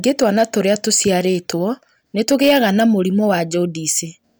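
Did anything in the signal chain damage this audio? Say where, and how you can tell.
Yes. Hard clipping occurs three times: from 0.07 to 1.11 s, from 2.21 to 2.83 s, and from 3.30 to 3.35 s. The speech peaks are driven about 3 dB, 5 dB and 2 dB past full scale. The likely point is the converter or a fixed-point format stage, which cannot pass anything larger. Peaks are sliced flat. Those square tops add high harmonics, heard as crackle and rasp on loud syllables. The worst fuzz falls in the middle event.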